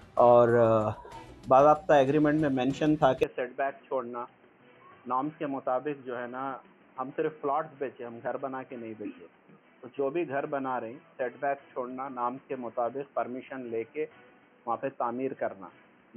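At 3.23 s the sound turns boxy, cut above 3.2 kHz and about 10 dB quieter, with new hiss unlike plain filtering: likely an input switched to a poorer device.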